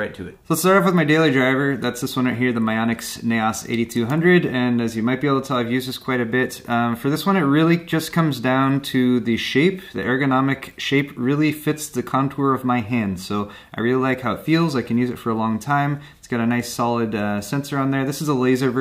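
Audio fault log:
No faults heard anywhere in this clip.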